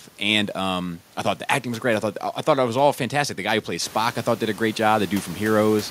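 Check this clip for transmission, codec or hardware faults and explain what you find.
No transmission, codec or hardware faults turn up in this speech clip. The room noise behind it rises by about 12 dB at roughly 4 seconds, yet stays about 21 dB below the speech after the rise, and it belongs to the recording space rather than the system.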